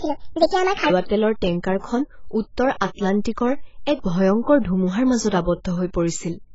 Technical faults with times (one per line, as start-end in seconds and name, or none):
0.00-6.55 AAC compression
0.00-0.90 section at the wrong speed
1.79-1.84 pre-echo